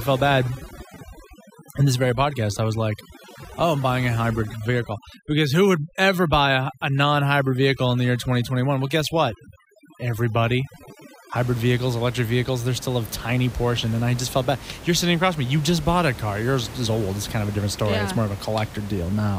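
From the start until 11.36 s, just before "vehicles electric vehicles they're", overdone noise removal is at work. The reduction was set too aggressively, so frequency bands close to its noise estimate were pushed down or switched off, taking quieter parts of the speech with them. The background drops and breaks up into twinkling specks. A simple noise gate would instead cut the whole signal on and off. After that point the room noise returns, sitting about 16 dB below the speech.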